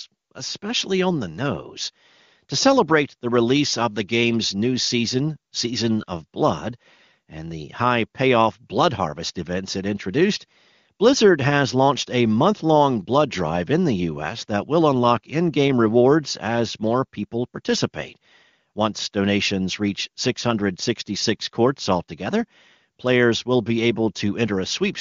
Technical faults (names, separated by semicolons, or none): none